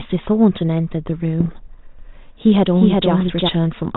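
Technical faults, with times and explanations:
1.40 to 1.69 s and 3.20 to 3.33 s, bit errors on an ADPCM link: short pops and gritty, rasping bursts with quick jumps in level. Flipped bits in the coded stream corrupt the decoder's step size and predictor, so each error keeps ringing for some milliseconds before it recovers. The damage points to an error rate of a few tenths of a percent, on top of the light coding damage of what sounds like 32 kbit/s G.726.
1.99 to 3.49 s, doubled audio track: a second, full-band copy of the sound runs roughly 0.4 s behind, about as loud as the original, with no decay or added room colour. It cuts in and out abruptly at both ends. The likely cause is the same signal being mixed in twice, either through a slower second capture path or an edit that left two copies out of step.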